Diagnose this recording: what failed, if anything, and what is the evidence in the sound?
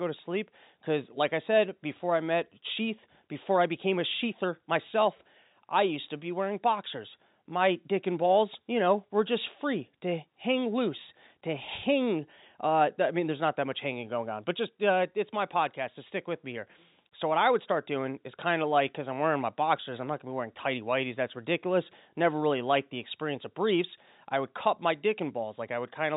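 Nothing here has failed: the speech simply went through ordinary G.711 telephone coding, which is why everything above about 4 kHz is missing, and that narrow band is just what a normal phone line sounds like.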